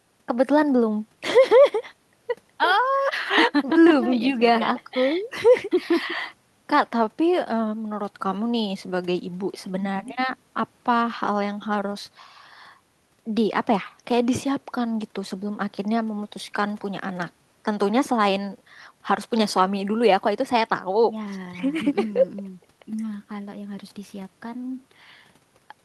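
A recording of speech with no technical faults to be heard anywhere in it, the signal remaining steady and intact from its first moment to its last.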